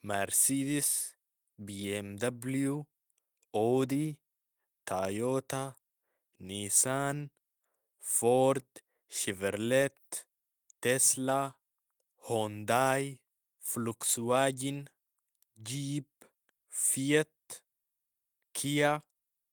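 No technical faults are audible.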